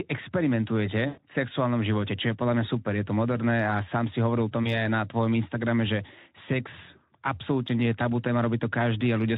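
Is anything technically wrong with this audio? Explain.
Yes. At 1.07 s to 1.21 s and again at 4.63 s to 4.79 s, the speech breaks up with VoIP packet loss concealed by the speech codec. The first gap is about 100 ms of lost audio and the second about 20 ms. The decoder fills each gap by repeating its last pitch and vocal-tract filter at falling gain, so the sound smears into a buzzy tone or coloured noise that fades. Recovery lags for a moment after packets resume. A spectrogram shows flat, repeated harmonic bands that dim, and the waveform shows a decaying periodic stretch. The transmission runs through Speex, which leaves light codec damage.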